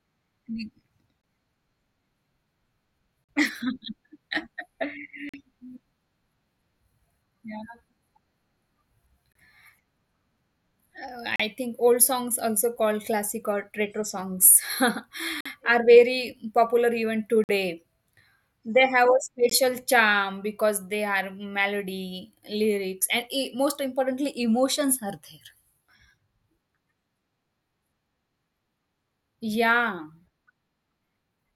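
In this speech clip, the time stamps of consecutive stream segments fail to line up, and the player pads each mismatch with silence. The result is a gap between stream segments, heard as hard-edged holes of about 20 to 50 ms at 1.22–1.24, 3.24–3.29, 5.29–5.34, 9.33–9.35, 11.36–11.40, 15.41–15.46, 17.44–17.49 and 19.50 s, just before "charm because they". The roughly 2-second spacing fits 2-second segments. Nothing is lost; the sound simply pauses.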